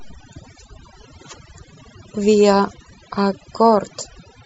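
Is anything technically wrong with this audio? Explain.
Yes. Throughout the speech there is overdone noise removal: an aggressive reducer is cutting individual frequency bands whenever they sit near its noise estimate, taking quiet speech detail with them. The pauses fall to near silence with twinkling specks. Unlike a noise gate, the cutting happens band by band rather than muting everything at once.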